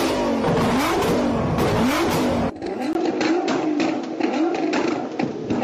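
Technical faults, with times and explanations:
2.93–5.64 s, input switched to a poorer device: after a 20 ms gap at 2.93 s the sound turns duller and narrower, with nothing above 7.6 kHz, a level shift of about 5 dB, and a new noise floor roughly 30 dB under the signal. The likely cause is the recording input moving to a lower-grade microphone or headset path. On a spectrogram the upper band cuts off abruptly at the gap; the waveform shows a brief flat line, then a changed envelope with a raised floor.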